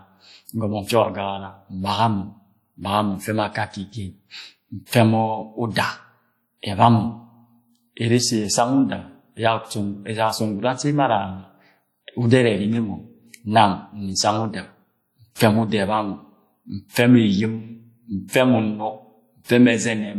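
Throughout the speech, a ringing, washy texture and a hiss that swells and recedes with the signal mark plainly audible WMA compression, likely at a low bitrate near 48 kbps, where long transform blocks smear quantisation noise and drop weak components, though content still reaches about 20.1 kHz.

From 18.28 to 18.33 s, a sharp attack arrives softened, with a brief hiss leading into it. This is pre-echo: the attack fell late in a transform block, so noise sized for the loud onset filled the quiet 51 ms before it.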